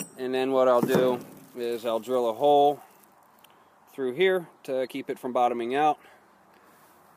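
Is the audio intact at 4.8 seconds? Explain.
No. Between 4.79 and 4.87 s, compressed frames were skipped: the decoder never played some frames, either missing or rejected as corrupt, so playback jumps ahead by about 20 ms. The join is heard as a short smeared blip if the codec is lossy, where neighbouring frames overlap, or as a hard click if it is lossless.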